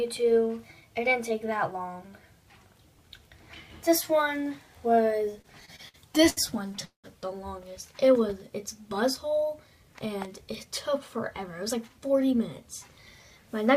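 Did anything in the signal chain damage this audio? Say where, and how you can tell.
Yes. Between 5.41 and 7.06 s the network jitter buffer runs dry twelve times, causing repeated stalls (stutter). Each hold stretches the last sound, the longest for 189 ms, and about 27% of that span is filled this way. Nothing is skipped, which sets it apart from packet loss.

From 9.99 to 11.89 s the jitter buffer speed-up trims short pitch-period slices to drain surplus delay. The audio plays at 106% speed, shedding about 150 ms. Pitch stays unchanged, unlike a sample-rate mismatch, where speed and pitch rise together.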